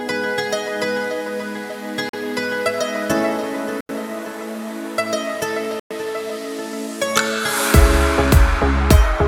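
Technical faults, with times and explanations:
2.09 to 5.93 s, Bluetooth stall: the sound drops to silence three times, at 2.09 s for about 43 ms, at 3.81 s for about 86 ms and at 5.80 s for about 110 ms, then resumes where it left off. The likely cause is radio interference delaying packets to the headphones, so their small playback buffer emptied and output halted until the resent data arrived. The gaps grow longer each time, pointing to worsening delivery delays.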